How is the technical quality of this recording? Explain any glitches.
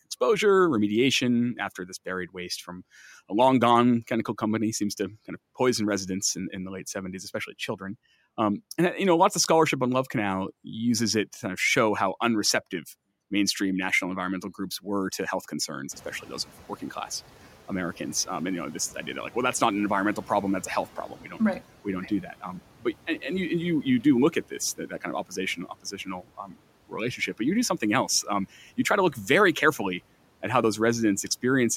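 One glitch stands out: the noise suppressor catching up after the room noise jumps by about 20 dB at roughly 16 s. From 15.91 s to 20.98 s the louder noise leaks through with little reduction, then gradually sinks as the suppressor's noise estimate adapts over about 5 seconds, ending roughly 8 dB lower. On a spectrogram the noise floor brightens abruptly, then fades across those 5 seconds. The waveform's baseline between phrases thickens, then slowly narrows. The raised room noise itself remains, about 24 dB below the speech.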